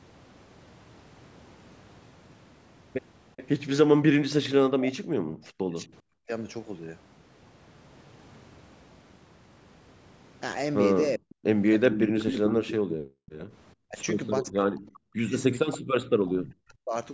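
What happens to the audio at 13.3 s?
From 13.26 to 13.31 s a faint, delayed copy of the speech surfaces, trailing the original by 422 ms and sitting very low, roughly 30 dB under the live speech. This is an echo leak, likely caused by a loudspeaker on the far end feeding the microphone with more than that side's echo canceller removed, so a brief scrap was sent back. Its fixed lag behind the original sets it apart from room reverberation, which smears continuously from the source rather than repeating it after a distinct gap.

Immediately after, from 13.36 to 13.5 s, the background collapses by up to about 39 dB for roughly 150 ms and then returns: background gated by the echo canceller. While playback was active, the canceller clamped the microphone hard, muting the room along with any echo. Unlike a network dropout, only the ambient bed vanishes, and it comes back when the gate releases.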